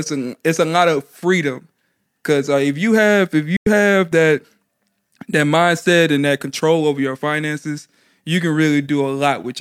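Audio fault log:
3.56 to 3.67 s, digital broadcast dropout: right after "if you have if" the speech snaps to silence with a very fast fade of about 3 ms, stays muted for roughly 0.1 s, and picks up again at "have that". The receiver stopped getting usable frames, either through lost signal or failed checksums, and muted its output until valid data returned. The gap fits about three lost frames. Whatever was broadcast during that interval is gone, so the speech jumps forward rather than pausing.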